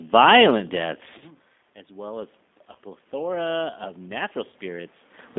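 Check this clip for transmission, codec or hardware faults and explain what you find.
The speech has two faults: a low-rate codec colouring the whole clip, and three short dropouts patched over by the decoder.

Throughout, the speech sounds thin, slightly rough and synthetic, confined to roughly 200 Hz to 3.6 kHz with no air above. This is the G.729 codec at 8 kbit/s, which rebuilds speech from a vocal tract filter, a pitch predictor and a few pulses per frame, discarding everything above the telephone band.

At 1.18 to 1.23 s, 2.72 to 2.77 s and 4.50 to 4.54 s, the speech briefly turns into a stretched sound that sags in level. This is VoIP packet loss concealed by the speech codec. About 30 ms went missing each time, which fits three 10 ms frames, and the decoder filled the gap by repeating its last pitch and filter at falling gain.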